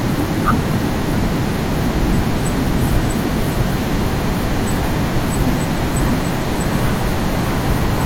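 Throughout, a doubled audio track: a full-band copy trails about 0.7 s behind, some 5 dB quieter, likely captured twice; spectrograms show each syllable repeated.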